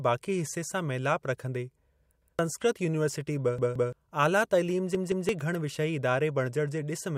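At 2.22 to 2.39 s, just before "यूनीवर्सिटी बि", a repeated buffer occurs: new audio arrived late, so the device replayed its last block of about 171 ms, which fits an 8192-sample buffer. That block is heard twice with a hard join, and roughly 0.15 s of speech is lost. The same fault recurs at 3.58 to 3.93 s, just after "यूनीवर्सिटी बि", and at 4.95 to 5.29 s, just before "घण विषयी". In both cases the block plays three times, producing a longer stutter and losing about 0.3 s each.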